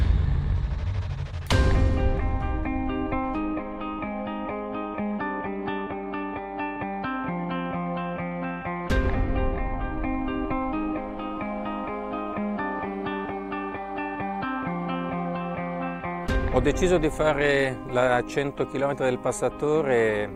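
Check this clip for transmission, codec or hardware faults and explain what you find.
There is one fault, mains hum, present from start to finish. A ground loop or a nearby transformer is letting the 50 Hz power supply leak into the signal path, so a steady low drone sits roughly 25 dB below the wanted sound. Unlike traffic or handling rumble, which is broadband and shifts over time, this tone holds a fixed pitch tied to the mains frequency and doesn't change with the audio.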